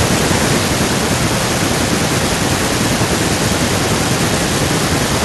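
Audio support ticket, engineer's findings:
No faults found in the speech recording. No component flagged for follow-up.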